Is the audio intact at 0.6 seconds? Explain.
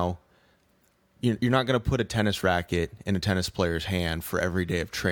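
Yes, at 0.6 seconds the speech plays through intact, with no dropout, click, distortion or other fault at that moment.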